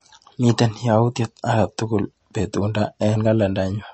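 Throughout, the speech stops dead at 8.4 kHz, and s sounds turn watery and swirly. This is likely MP3 compression, fitting roughly 32 kbps.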